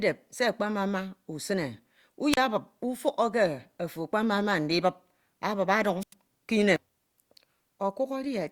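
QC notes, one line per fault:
2.32–2.37 s and 6.00–6.14 s, wireless microphone squelch dropout: the radio link from the transmitter weakened until the receiver's squelch cut its output, muting the speech for about 35 ms in the first event and about 93 ms in the second. Each time, a short burst of hiss comes up as the signal fails, the gate then leaves a hole of near silence, and the speech comes back.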